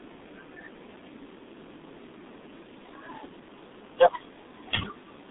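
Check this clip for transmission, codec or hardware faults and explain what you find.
One codec fault runs through the whole speech clip. G.723.1 codec damage is present from start to finish. The codec squeezes speech into long 30 ms frames at a very low rate, which fits roughly 6 kbit/s, and refreshes its vocal model slowly between frames. Its telephone band of 200 Hz to 3.7 kHz leaves nothing above 3.8 kHz. The damage is heavy, so the speech sounds muffled and hoarse, with consonants smeared together.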